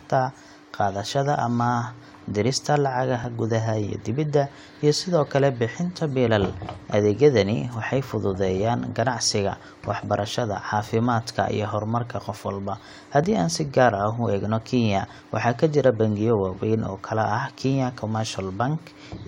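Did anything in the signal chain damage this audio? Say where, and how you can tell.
Yes. Overlap between stream segments, at the network or streaming stage, causes tiny skips at 3.24 s, 13.24 s and 15.22 s in this speech. The 2 s segments carried overlapping time stamps, so the player trimmed a few milliseconds of real audio. Each removal shows as a waveform discontinuity and a thin vertical broadband line on a spectrogram.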